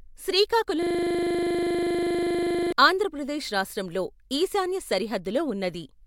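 From 0.83 to 2.72 s, a system hang loop: the driver stalled while the hardware replayed one 40 ms buffer, giving a steady 25 Hz buzz before "ఆంధ్ర ప్రదేశ్ రాష్ట్రం లో".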